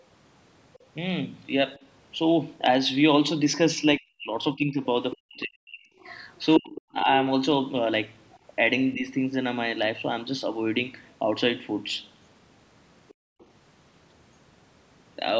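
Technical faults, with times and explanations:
3.97–4.81, 5.18–6.06, 6.59–7.08 and 8.94–9.05 s, speech suppressed in double talk: the talker's level sinks by roughly 30 to 40 dB in the first three and about 10 dB in the last, likely because an echo canceller, hearing both sides at once, turned everything down. The waveform shows the envelope pinched.
5.12–5.16, 5.99–6.80 and 13.08–13.46 s, other side's voice leaking through: a second, fainter voice surfaces, about 15 dB below the talker at first and nearer 25 to 30 dB below later. This is likely loudspeaker pickup the canceller failed to remove. On a spectrogram it shows as a thin, separate harmonic trace under the main voice.
13.14–13.39 s, background gated by the echo canceller: while the loudspeaker plays, the canceller clamps the microphone hard, so the room tone drops by about 40 dB and then returns once the canceller releases. The noise floor shows a clear notch on the waveform and a blank band on the spectrogram.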